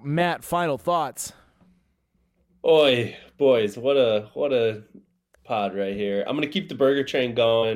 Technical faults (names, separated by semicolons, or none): none